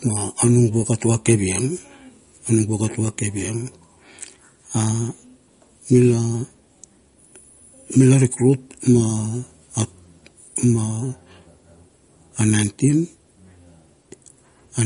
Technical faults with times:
0.00-14.86 MP3 compression

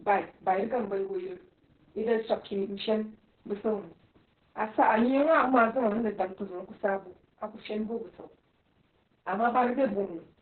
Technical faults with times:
0.00-10.41 Opus voice compression

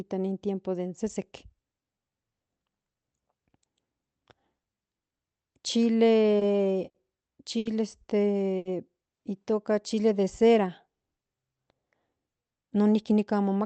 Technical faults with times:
6.39-6.44 short stall from a late packet
6.89-6.97 short stall from a late packet
7.58-7.68 short stall from a late packet
8.57-8.68 short stall from a late packet
9.71-10.68 jitter buffer slow-down
12.63-13.64 jitter buffer speed-up

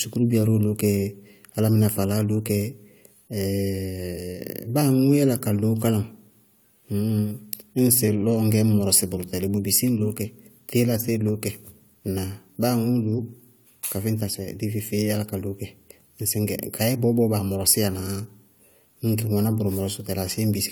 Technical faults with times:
none

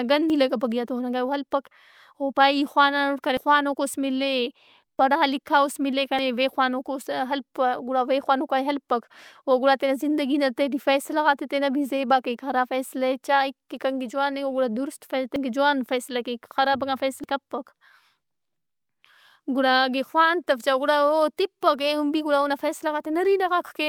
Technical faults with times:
0.30 dropped buffer (overrun)
3.37 dropped buffer (overrun)
4.99 dropped buffer (overrun)
6.19 dropped buffer (overrun)
15.36 dropped buffer (overrun)
17.24 dropped buffer (overrun)

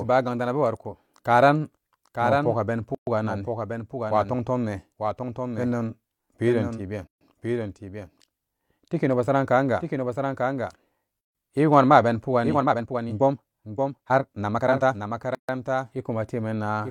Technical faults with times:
0.00-16.91 doubled audio track
2.95-3.07 gap at a join of encoded pieces
7.07-7.21 gap at a join of encoded pieces
11.21-11.35 gap at a join of encoded pieces
12.41-15.11 time-stretched section
15.35-15.49 gap at a join of encoded pieces

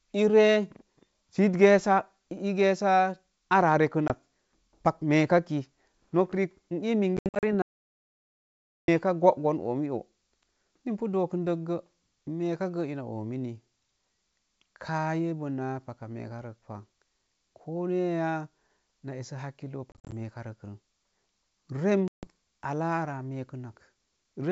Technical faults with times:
4.08-4.12 packet loss on an ADPCM call
7.17-7.44 packet loss on an ADPCM call
7.62-8.88 audio dropout to silence
19.92-20.12 packet loss on an ADPCM call
22.08-22.27 packet loss on an ADPCM call

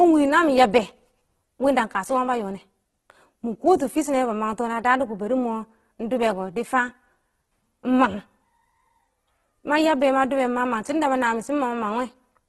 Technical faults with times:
0.00-12.49 Opus compression

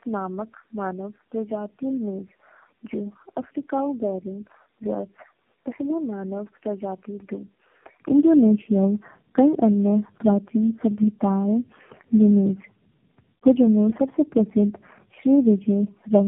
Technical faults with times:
0.00-16.27 tandem speech coding
0.00-8.00 input switched to a poorer device

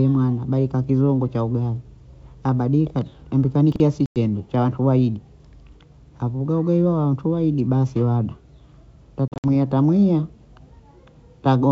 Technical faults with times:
3.72-3.80 chunks out of order
4.06-4.19 packet loss on an ADPCM call
9.28-9.49 packet loss on an ADPCM call

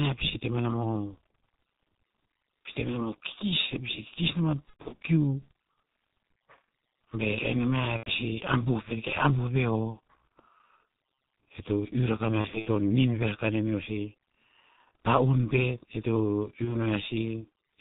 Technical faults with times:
0.00-17.80 G.723.1 codec
4.70-5.00 VoIP packet loss concealed by the speech codec
7.97-8.09 VoIP packet loss concealed by the speech codec
12.41-12.68 VoIP packet loss concealed by the speech codec
16.65-16.76 VoIP packet loss concealed by the speech codec

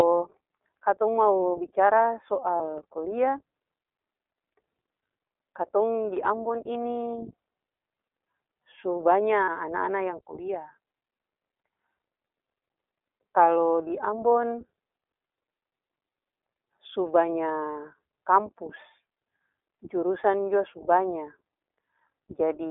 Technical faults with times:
0.00-22.70 iLBC codec
2.56-2.62 lost iLBC frames
9.44-9.49 lost iLBC frames
13.88-13.90 lost iLBC frames

